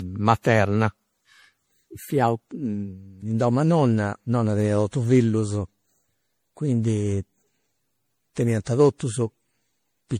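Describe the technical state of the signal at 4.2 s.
At 4.2 s the speech carries generation loss across the whole clip: swirly, hollow, smeared attacks, likely from about seven MP3 passes at 64 kbit/s, stacking artefacts beyond what one encode produces.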